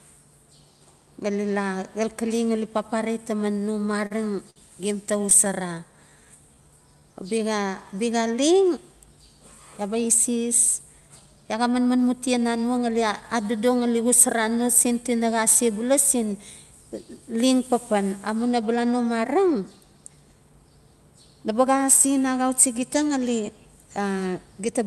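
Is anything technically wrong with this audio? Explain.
Yes. The speech has several timing faults from the receiving end of a call.

From 3.53 to 4.12 s the speech stutters and drags. This is repeated stalls (stutter): packets kept arriving late, the jitter buffer ran dry five times, and the receiver stretched the last sound for 69 ms in total to cover the gaps. The longest hold was 34 ms. Nothing is lost, but about 12% of that stretch is filled-in sound.

Between 4.50 and 4.58 s, just before "gem ta", one sound hangs on too long. This is a short stall from a late packet. A single packet missed its slot, so the receiver held the previous sound for 56 ms until it arrived, then carried on from the same point.

From 5.48 to 7.67 s, right after "gem ta", the talking slows to about 93% speed at an unchanged pitch, with drawn-out sounds. This is a jitter buffer slow-down. The receiver rebuilt its reserve by repeating single pitch periods and bits of pauses, adding 171 ms.

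From 9.81 to 10.44 s and again from 10.86 to 11.92 s the delivery sounds hurried but keeps the same pitch, running at 107% and then 109%. This is a jitter buffer speed-up. With too much audio queued, the receiver trimmed short pitch-period pieces to cut the delay, dropping roughly a twentieth of a second in the first stretch and a tenth in the second.

The call codec itself sounds like Opus at a moderate bitrate. Its top end stops near 12 kHz.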